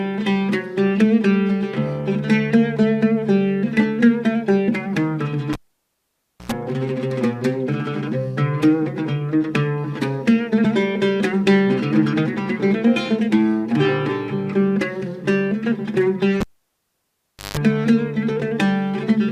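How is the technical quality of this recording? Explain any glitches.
Two glitches mar the recording, both a cable pulled and plugged in. At 5.53 s and 16.41 s a live lead was disconnected and reinserted. Each gives a pop, near silence (0.94 s, then 1.12 s), mains buzz while only the tip touched (95 ms at 60 Hz, then 159 ms at 50 Hz), and a pop as sound returns at 6.52 s and 17.57 s.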